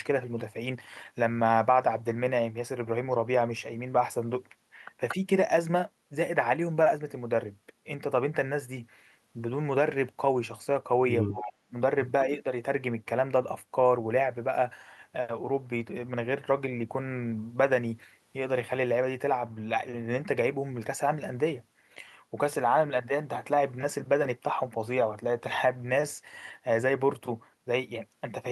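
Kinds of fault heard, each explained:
Echo leak: twice, at 5.08 and 11.28 s, a faint copy of the speech returns about 232 ms late, roughly 10 dB down, likely a far-end loudspeaker echo slipping past its canceller.
Speech suppressed in double talk: around 11.3 to 11.7 s the talker drops out, roughly 35 dB deep, then dips slightly near 12.3 s, likely the canceller ducking its own talker along with the loudspeaker echo.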